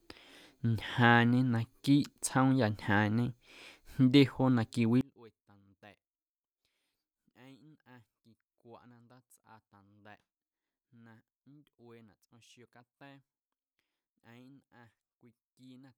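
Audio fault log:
5.01 s to the end, one channel inverted: the speech abruptly drops by about 31 dB to a faint residue. The likely cause is reversed polarity on one stereo channel, cancelling the shared centre in mono. The waveform shrinks sharply.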